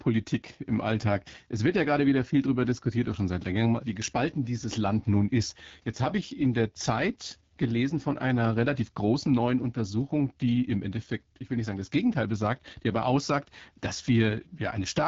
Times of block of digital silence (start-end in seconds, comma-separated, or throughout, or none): none